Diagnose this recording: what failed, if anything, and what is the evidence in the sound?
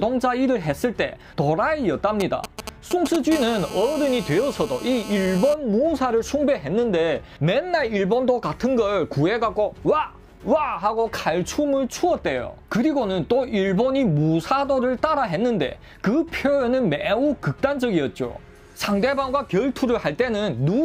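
From 2.20 to 3.16 s a galloping dit-dit-dit of short raspy buzzes appears, fairly loud, only a few dB under the programme. These are GSM signalling bursts: a nearby 2G phone's radio pulses, repeating near 217 Hz, are rectified in the analogue wiring or input stage.

From 3.32 to 5.54 s the pattern becomes a continuous hard, harmonic-rich buzz at 217 Hz, about 14 dB below the signal and unrelated to it. This is GSM phone buzz: the phone is now in a call, sending steady bursts that the analogue circuitry demodulates.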